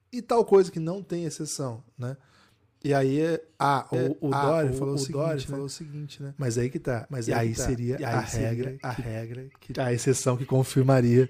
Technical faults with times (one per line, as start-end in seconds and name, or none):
3.94-9.76 doubled audio track